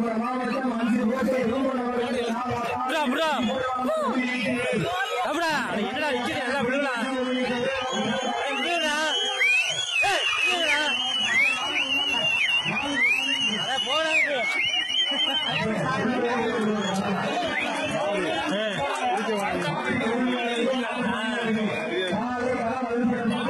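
At 6.11 s the quality drops suddenly and stays low to the end. This is an adaptive stream switching to a lower bitrate. The connection slowed, so the player fetched a cheaper version of the audio. There is no gap at the switch. From there, nothing is heard above about 11.8 kHz, and the top end drops away. Codec artefacts rise. The sound points to a shift from mid-rate AAC to a very low-rate HE-AAC stream.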